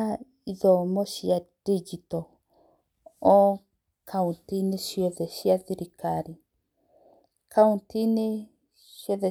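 No technical faults can be heard anywhere in this speech recording. Nothing in the signal chain stands out as having gone wrong at any point.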